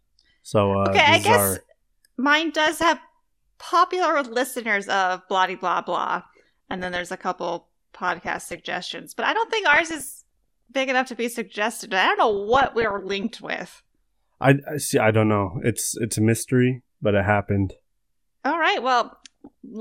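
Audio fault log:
2.60–2.88, 6.12–7.09, 8.08–8.60, 9.73–10.20, 12.31–13.29 and 19.09–19.48 s: DAB burbling. Burbling noise rides over the speech in six short bursts. Weak reception lets bit errors slip past error correction into the MP2 audio. The error rate is low, about one percent or under, but is heaviest near the end. Corrupted samples put short noise blips in single sub-bands, and corrupted scale factors make sub-bands jump in level for up to a frame. That produces the burbling.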